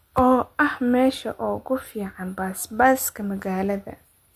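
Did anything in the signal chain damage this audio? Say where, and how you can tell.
No, nothing in this speech stood out on listening as damage from any stage of the signal chain.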